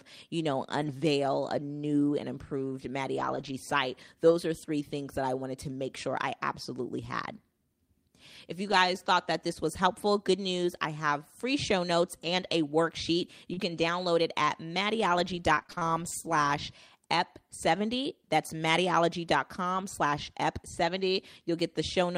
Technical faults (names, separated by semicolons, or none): lost packet rebuilt from error correction; repeated packet loss (robotic sound)